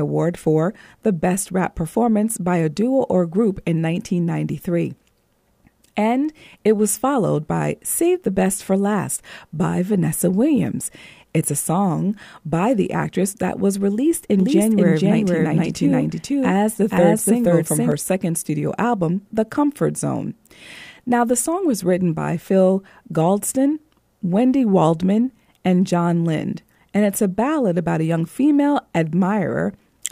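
From 14.40 s, after "actress that was released", a doubled audio track runs until 17.92 s, before "second studio album". A second full-level copy trails about half a second behind, likely a capture or edit misalignment. On a spectrogram, every syllable's pattern reappears shifted right, with no decay, and the copy starts and ends abruptly.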